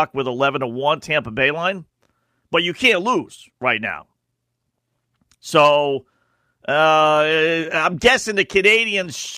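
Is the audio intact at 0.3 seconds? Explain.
Yes, at 0.3 seconds the speech is intact, with no dropout, click, distortion or other fault audible there.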